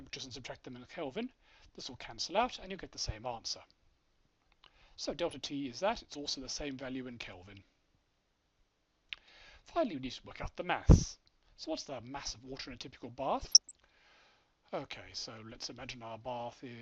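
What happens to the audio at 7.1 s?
Nothing goes wrong at 7.1 s; the audio plays through that moment intact, with no dropout, click or other fault.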